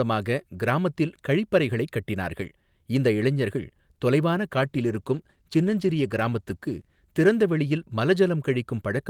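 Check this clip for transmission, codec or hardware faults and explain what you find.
One fault: a call bitrate drop. From 4.5 to 8.13 s, just after "கட்டினார்கள் இந்த இளைஞர்கள் தொலைவான", the bandwidth estimate fell and the encoder switched to far fewer bits, consistent with a fall from about 48 to 17 kbps. The coarser coding makes the speech sound rougher and more smeared, bottoming out for about 2.57 s before recovering.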